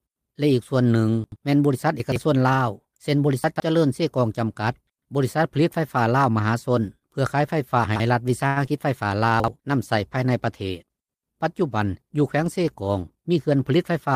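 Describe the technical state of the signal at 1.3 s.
At 1.3 s the signal shows chunks out of order, spanning 1.24 to 1.36 s. One 40 ms chunk was delivered or written late and ended up two chunks behind its proper place, so it plays after the two chunks that should follow it. No audio is missing, but this 120 ms stretch is shuffled and joined by three hard edits, which come across as a brief jumbled, garbled moment.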